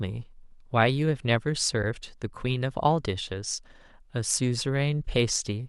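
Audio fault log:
1.83 s, AAC frame loss with muting: about 10 ms of speech drops out. The decoder zeroes that frame, and the overlapping windows fade it out and back in, leaving a brief dip, unlike a hard sample dropout.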